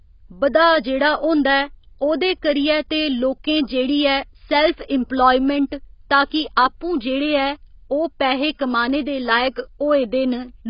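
A speech clip, heavily degraded by what is likely AAC compression throughout. Nothing is heard above 5.1 kHz, so the sound is dull and muffled. The coarse quantisation leaves the spectrum patchy. Sustained sounds and sibilants take on a smeared, warbling, fizzy texture. The depth of the damage fits a bitrate around 16 kbps, where the encoder must drop the top band and starve the rest. Pre-echo appears just after "सैल्फ इम्पलायमैंट", from 6.29 to 6.31 s. A short hiss, spread over about 21 ms, runs ahead of a sharp onset. The codec spread noise meant for the loud attack across the quiet moment before it. The attack itself sounds softened and smeared.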